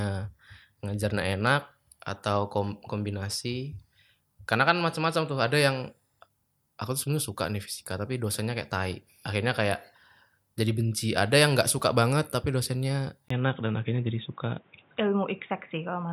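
From 13.28 s, after a 20 ms gap, the speech turns dull and boxy with nothing above 3.8 kHz, likely from an input switched to a poorer device.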